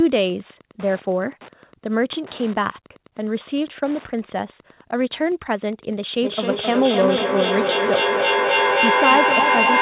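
Wi-Fi interference runs through the whole of this speech recording as a steady tick repeating every 102.4 ms, roughly ten times a second and about 25 dB below the speech. A nearby Wi-Fi radio's beacon bursts are picked up and rectified by the audio circuitry, which turns them into audible clicks. Feedback echo between two devices takes over from 6.23 s to the end of the clip at 9.81 s. Each phrase comes back roughly every third of a second, thinner and more ringing on each pass, and the repeats pile up instead of fading, peaking about 2 dB louder than the speech itself. Two devices in the same room are on one call, so one plays what the other's microphone sent, that microphone captures it again, and neither echo canceller removes sound its own device did not play. Throughout, the audio stops at 4 kHz, which fits a narrowband G.711 call path.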